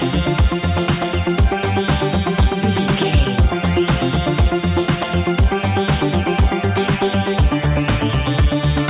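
No faults are audible; the audio carries nothing above 4 kHz, the narrowband ceiling of a telephone-grade call path, which fits G.711 A-law at 64 kbps.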